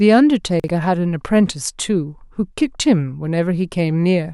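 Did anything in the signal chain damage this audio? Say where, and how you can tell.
Yes, there's a brief jumble from 0.60 to 0.68 s, which is chunks out of order at the driver or buffer stage. One roughly 43 ms block landed a chunk late, so the sequence swaps and leaves three hard joins.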